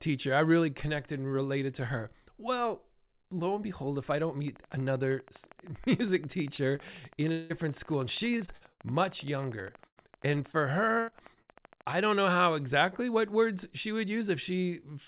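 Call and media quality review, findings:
Train of clicks: steady ticking at 12.5 per second, peaks roughly level with the speech, 4.48–12.22 s, from after "behold if I don't" to "how exactly what words". Likely external interference or a struggling interface.

Short concealed packet loss: brief smears at 6.56–6.60 s and 6.76–6.80 s, about 20 ms missing each. Jitter buffer or decoder concealment extended the preceding sound, then crossfaded back.

Long network dropout: stretched, buzzy hold at 7.32–7.52 s, about 180 ms of audio gone and fully filled with no silence. Likely a network outage; concealment continued the last sound across the hole.

Repeated packet loss (robotic sound): choppy bursts at 8.38–8.81 s (5 gaps, longest 56 ms, 35% concealed), 9.87–10.56 s (4 gaps, longest 97 ms, 19%) and 11.00–11.57 s (5 gaps, longest 79 ms, 34%). Repeated packet loss, each gap patched by concealment. 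Nothing above 4 kHz, consistent with a narrowband G.711-style call path.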